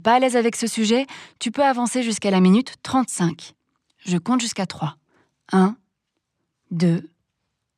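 Listening to this speech recording, nothing technically wrong stood out at any point.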